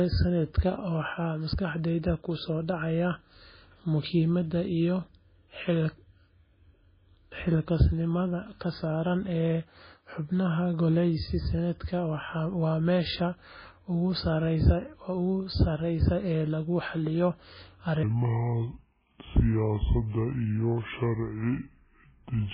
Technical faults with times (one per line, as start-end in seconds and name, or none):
0.00-22.53 MP3 compression
18.03-22.53 section at the wrong speed